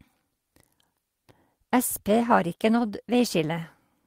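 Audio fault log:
2.71–2.89 s, lost packet rebuilt from error correction: for a short stretch the speech turns rougher and grainier but never drops out. Packets went missing, and the ones that followed carried low-bitrate spare copies (Opus in-band FEC), which the decoder played in place of the originals. That's why there's no hole, just a coarser patch. The texture of it points to roughly five packets, about 100 ms of rebuilt audio.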